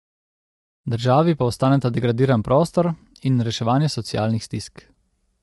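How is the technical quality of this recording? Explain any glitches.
The recording carries plainly audible codec damage from start to finish, most likely low-delay AAC compression of the kind used in video calls. The clip opens with a smooth fade-in over roughly its first second, which is an ordinary edit and leaves no click.

Throughout the speech, the voice sounds rough and grainy, with a hiss-like texture filling the gaps between harmonics. This is likely AAC-ELD. Its very short frames, around 10 ms, resolve pitch harmonics poorly, and at a bitrate that fits roughly 32 kbps the encoder spends its bits coarsely and lets noise creep between partials. It also discards the top band entirely, so nothing sounds above 11.6 kHz.

On a spectrogram, the harmonic stripes look smeared and speckled, with a noisy floor between them and a flat, empty region above 11.6 kHz. In the waveform, the fade-in appears as a steadily growing envelope with no hard edge.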